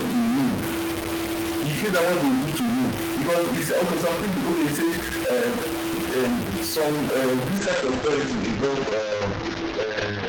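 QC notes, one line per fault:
Throughout, stuck bit: a gritty distortion rides on all the speech, and the pauses fill with steady noise instead of going quiet. Unlike clipping, it persists at low levels and in silence, which points to a likely single data bit held fixed.
7.58 s to the end, call bitrate drop: the encoding falls from 32 kbps to 9 kbps and the bandwidth narrows from 20 kHz to 8 kHz, so the speech turns muffled and watery. Unlike packet loss, there are no gaps or repeats, just sustained coarser coding.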